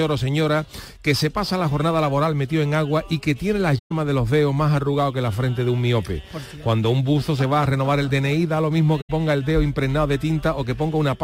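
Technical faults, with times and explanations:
3.78–3.92 s and 9.01–9.10 s, AAC frame loss with muting: roughly 128 ms and 85 ms of sound drop to silence, consistent with six and four lost frames. Overlapping windows fade the edges, so the holes are soft-edged, unlike a hard dropout.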